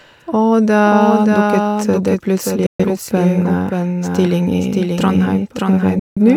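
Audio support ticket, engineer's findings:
Doubled audio track throughout: full-band second copy of the speech trailing about half a second behind, roughly 5 dB down, dry, no room colour. Likely a second capture via a slower path or an edit holding two offset copies.

Digital broadcast dropout at 2.66–2.85 s and 5.99–6.22 s: abrupt mutes with a very fast fade of about 3 ms. Receiver lost the signal or rejected corrupt frames. Roughly 128 ms and 171 ms of programme missing, consistent with three and four lost frames.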